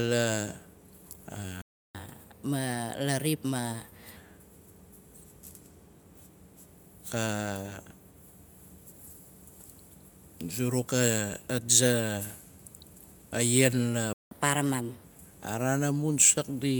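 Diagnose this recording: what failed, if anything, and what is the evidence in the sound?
The speech drops to silence mid-flow twice and then carries on: from 1.62 to 1.95 s, a gap of about 330 ms, and from 14.13 to 14.31 s, about 180 ms. This is a playback stall, likely the player's buffer running dry or its output thread being blocked.

Straight after each gap the speech runs fast and sounds higher. From 1.95 to 4.16 s it plays at 1.15 times speed, roughly two semitones up. From 14.31 to 15.04 s it plays at 1.25 times, roughly four semitones up. This is catch-up at higher speed, where the player resamples its backlog to win back the lost time and then returns to normal pitch.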